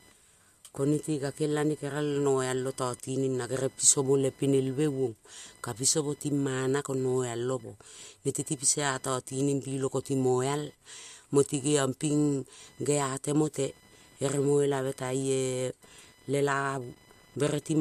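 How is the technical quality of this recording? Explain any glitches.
The speech carries a fault that runs the whole length of the recording. From start to finish there is a faint, high chirping buzz with a pulse rate of around 1 kHz, sitting roughly 30 dB below the speech. It rises and falls with the computer's workload rather than with the talking. This is computer activity noise. Changing processor, graphics or mouse load shifts the ground shared with the audio circuit, and that fluctuating ground current ends up in the recorded signal.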